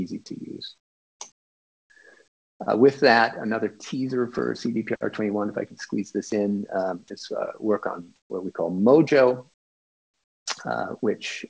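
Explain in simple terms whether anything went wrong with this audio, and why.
A couple of things slipped. Comfort noise in place of the background: at 0.78–1.2, 1.32–1.9, 2.28–2.6, 8.16–8.3 and 9.54–10.46 s the real background turns into flat, quieter hiss, likely because the sender paused transmitting. Sound dropped by the voice detector: at 6.30–6.32 s a tiny sliver of sound vanishes into that same hiss, likely mistaken for background.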